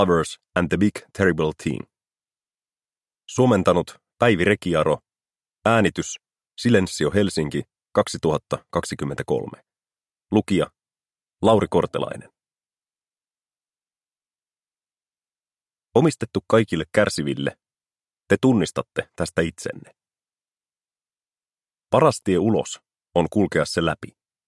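Nothing stood out as a technical fault on listening to this recording.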